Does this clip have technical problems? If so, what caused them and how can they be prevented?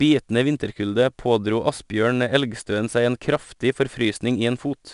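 Yes. 4-bit ADPCM compression runs throughout: gritty hiss rides every loud syllable, attacks distort, and nothing above 10.6 kHz fits a roughly 89 kbps stream. Prevent it by keeping a lossless or higher-bit-depth master.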